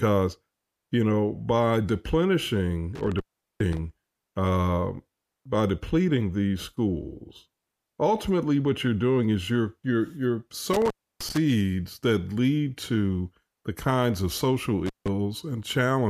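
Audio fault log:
2.95–3.79 s, 10.73–11.37 s, 14.86–15.09 s: intermittent contact. The speech drops out after "you know by deplenishing", "is you're you're you're" and "the kinds of social", with crackle at the edges. A loose connection opens for about 390 ms, 300 ms and 160 ms respectively.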